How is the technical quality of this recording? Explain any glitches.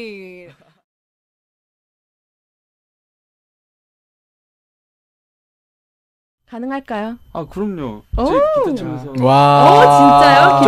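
No glitches or technical faults can be heard here.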